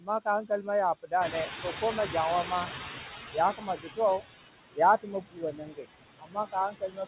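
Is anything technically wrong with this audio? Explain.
Yes. A noise suppressor is acting on this speech and producing three kinds of fault.

Noise suppressor artifacts run through the whole clip. The suppressor pulls the steady noise down by about 17 dB frame by frame, so the background sinks in pauses and rises under speech.

Speech cut by the noise suppressor happens six times: 0.01–0.68 s (about 12 dB), 1.03–2.1 s (about 15 dB), 2.44–2.69 s (about 7 dB), 3.32–4.22 s (about 15 dB), 4.7–5.87 s (about 22 dB), and 6.19 s to the end (about 21 dB). Quiet consonants and word endings are treated as noise and attenuated with the background, so they sound swallowed or faint. The affected portions range from roughly a tenth of a second to well over half a second.

Noise suppressor catching up runs from 1.2 to 4.2 s. The room noise jumps by about 12 dB near 1 s, and the suppressor's noise estimate lags. 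The louder background passes through with less reduction at first, then sinks over about 3 s as the estimate adapts toward about 15 dB of cut.

The audio has no content above 4 kHz, which fits the narrowband G.711 A-law call codec.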